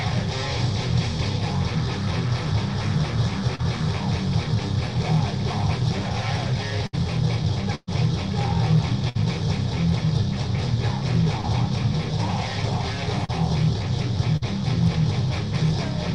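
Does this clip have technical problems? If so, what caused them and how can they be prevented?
Yes. Short concealed packet loss at 3.55, 11.41 and 13.25 s: the receiver extended the preceding sound for 25 to 33 ms, leaving a brief smear that looks smoothed and repetitive on a spectrogram. A burst of packet loss at 6.87, 7.75, 9.09 and 14.37 s filled gaps of 50 to 123 ms with fading continuation, leaving a decaying patch on the waveform, with a 10 ms dropout at 7.75 s. About 40 to 120 ms of audio is skipped at each. Both can be prevented with a larger jitter buffer, forward error correction and a more stable network connection.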